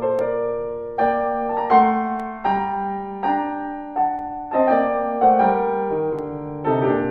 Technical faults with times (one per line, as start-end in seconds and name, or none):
0.19-6.19 periodic USB or driver dropouts